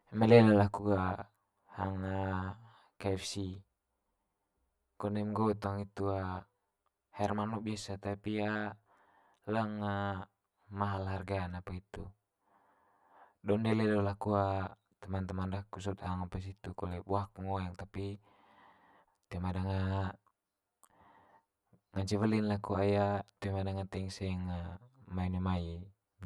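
Speech with channel delay (comb filtering) throughout. One channel lags by roughly 10 ms. Summed to mono, it cuts notches from about 50 Hz upward, sounding hollow.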